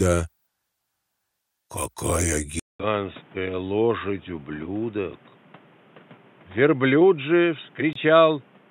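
At 2.60 s the sound cuts out for about 200 ms. It returns dull and boxy, with nothing above 3.8 kHz. It is about 5 dB quieter, with a new noise floor around 30 dB down. The likely cause is an input switched to a poorer device.

At 7.93 s a 24 ms silence opens in continuous sound. This is a gap at a join of encoded pieces. Each piece kept its encoder's start delay and end padding. The codec smears its edges. The sound then resumes where it stopped.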